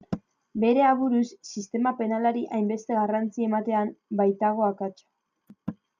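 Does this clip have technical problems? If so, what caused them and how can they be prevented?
Yes. From 3.10 to 4.33 s the speech turns slightly dull, a channel delay (comb filtering) fault. One channel lags by roughly one sample, about 0.02 ms, so the mono sum cancels near 20 kHz and softens the top. Align channel timing before summing to mono.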